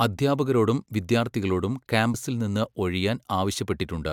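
Right after "അദ്ധ്യാപകരോടും വിദ്യാർത്ഥികളോടും", at about 2.13 s, there's a quick blip from damaged data in the compressed stream. Some bytes in that spot got lost or overwritten, so the decoder couldn't make sense of the frame there. It lost its place and had to hunt for the next valid frame header before playback could settle again. What you hear is a tiny glitch.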